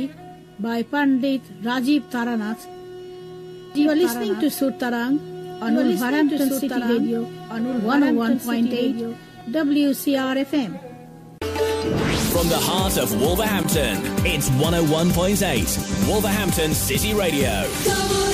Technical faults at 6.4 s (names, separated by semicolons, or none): doubled audio track